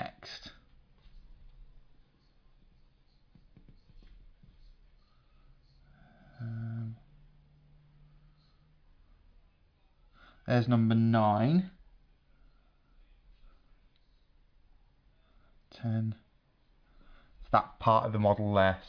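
No faults can be heard anywhere in the recording.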